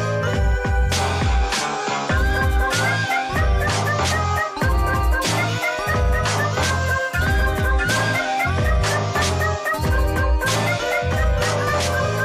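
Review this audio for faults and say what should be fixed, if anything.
Nothing needs to be fixed, since no faults can be heard in the audio.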